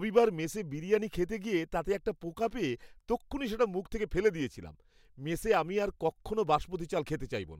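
A speech recording, with nothing technically wrong with it.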